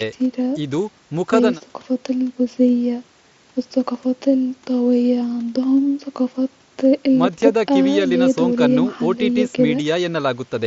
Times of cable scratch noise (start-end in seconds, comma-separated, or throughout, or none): none